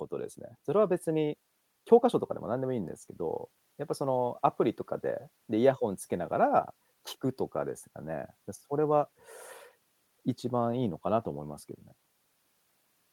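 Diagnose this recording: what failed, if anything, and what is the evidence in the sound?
Nothing failed; no faults heard.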